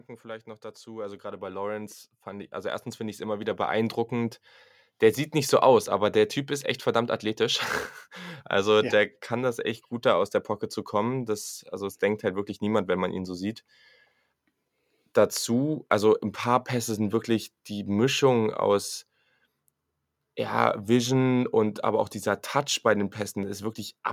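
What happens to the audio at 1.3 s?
At 1.3 s the level is partway through an automatic gain rise. It runs from 0.22 s to 4.41 s. The gain control judged the input too quiet and lifted it by about 15 dB. Speech and background swell together.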